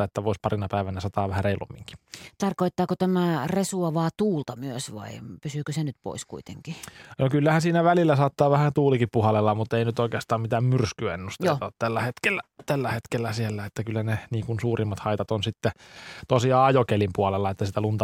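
No technical faults are audible anywhere in this speech recording.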